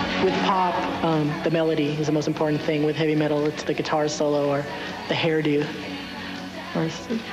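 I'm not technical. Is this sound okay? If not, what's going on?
Yes, nothing in this recording points to a technical fault in how the sound was captured, processed or delivered.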